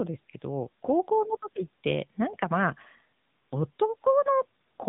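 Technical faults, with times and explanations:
Throughout: AMR narrowband mobile codec. The speech stops dead near 3.8 kHz and has a plainly audible buzzy, synthetic edge from pulse-driven vocal-tract modelling, which fits AMR-NB at about 8 kbps. A plain low-pass filter would dull the sound without that coarse, artificial texture.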